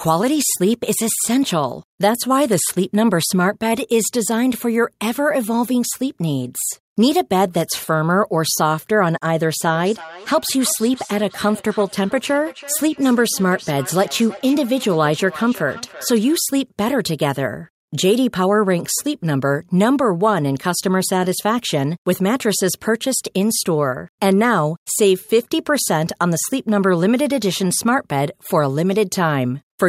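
It's a speech recording, and from 9.64 to 16.47 s there's feedback echo between two devices: the speech comes back around every 0.3 seconds, peaking at about 19 dB below the voice, because one device replays the other's mic and that mic picks it up again.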